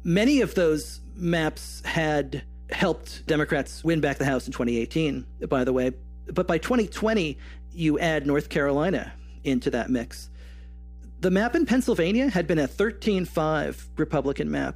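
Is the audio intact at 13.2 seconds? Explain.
No. Mains hum runs through the whole clip, so it is present at 13.2 seconds. It sounds like a steady low 60 Hz tone sitting about 15 dB below the speech, most likely from a ground loop or nearby transformer feeding the power line into the signal. A spectrogram shows a constant horizontal line at 60 Hz, with fainter harmonics above it.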